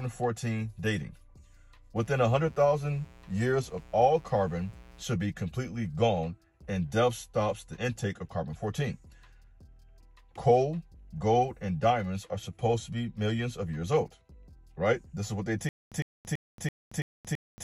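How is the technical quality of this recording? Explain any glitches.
Two faults stand out: a stretch of mains buzz early on and a stutter with silent gaps that runs to the end.

From 1.96 to 5.02 s there is mains buzz at about 25 dB below the sound. Sharp switching spikes, from a dimmer, rectifier or missing shield, enter twice per 60 Hz cycle and build a ladder of harmonics up into the kilohertz range, heard as a steady, raspy buzz. A spectrogram shows evenly spaced horizontal lines at multiples of 60 Hz for just that span; the waveform carries a fine, regular spiky texture under the sound.

From 15.69 s to the end, a stutter with silent gaps takes over. A burst of about 105 ms repeats six times, each followed by about 228 ms of silence, so it returns every 333 ms. This is likely a player or stream stall, with each retry replaying the last fragment before running empty. The sound that belonged in that time is lost. 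The waveform shows identical short blocks separated by flat gaps, and the spectrogram shows matching repeated slices with blank columns between.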